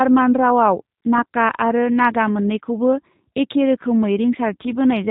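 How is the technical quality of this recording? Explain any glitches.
The technical quality is limited by codec processing throughout. The G.729 codec damage is plainly audible from start to finish. The speech is rebuilt from a filter model and sparse pulses, with nothing above 4 kHz. It sounds thin, rough and slightly synthetic, which fits a low rate of around 8 kbit/s.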